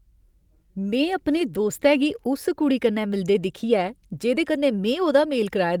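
A speech recording with nothing technically wrong with it.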